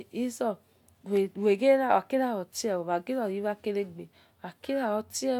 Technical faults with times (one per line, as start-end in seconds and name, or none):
none